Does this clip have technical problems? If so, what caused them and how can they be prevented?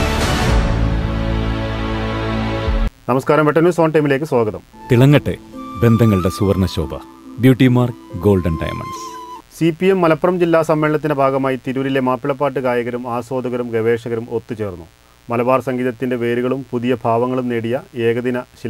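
Yes. Mains buzz runs through the whole clip: a steady, raspy buzz about 35 dB below the sound. It is built on 60 Hz mains. Something like a dimmer, a rectifier or an unshielded cable lets sharp switching spikes into the signal path twice per mains cycle. Those spikes carry harmonics of 60 Hz far up into the kilohertz range, which gives the buzz its edge. To prevent it, keep audio cables shielded and away from dimmers and power supplies.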